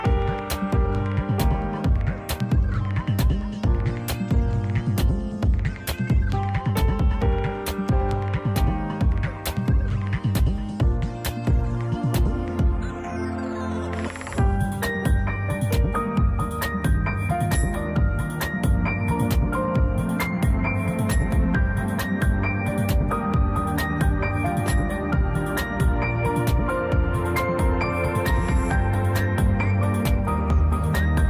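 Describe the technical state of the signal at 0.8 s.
At 0.8 s the signal is intact, with no audible dropout, distortion or other technical fault at that moment.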